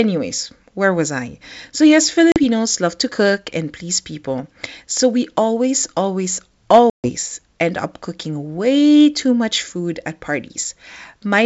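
Packet loss on an ADPCM call hits twice, at 2.32 to 2.39 s and at 6.90 to 7.10 s. Silent holes of 40 ms and 140 ms cut in abruptly. Afterwards the decoder's predictor and step size no longer match the sender's, so the speech resumes briefly slightly distorted.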